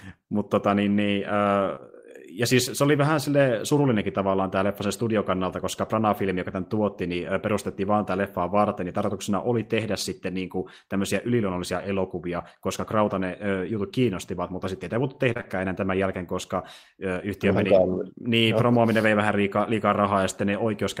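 A brief smear at 1.75 to 1.79 s, just before "ja siis se oli", is short concealed packet loss. A longer wobble runs from 15.33 to 15.46 s, between "mutta sitten ei voitu" and "enää tämän jälkeen koska", where three losses fall back to back. Each gap, which fits a lost 20 ms packet, was patched by extending the preceding sound for roughly 14 to 27 ms before blending back into the real signal.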